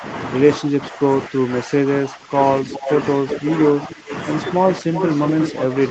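Speech recorded through a call's microphone path, band-limited to 8 kHz, with two recurring faults. Speech suppressed in double talk appears from 0.59 to 3.45 s, where about one and a half seconds of the voice dips by up to about 10 dB, then again at 3.78–4.11 s (about 15 dB), 4.80–4.93 s (about 10 dB) and 5.51–5.76 s (about 5 dB). The likely cause is an echo canceller that cannot separate the near talker from simultaneous far-end audio and attenuates both. Echo leak is heard at 2.74–2.92 s, 3.31–4.15 s and from 4.94 s to the end as a copy of the voice delayed by 359 ms. It sits about 10 dB below the speech, rising to about 5 dB below in the final stretch, which points to a speakerphone whose canceller is likely failing to remove all of the loudspeaker pickup.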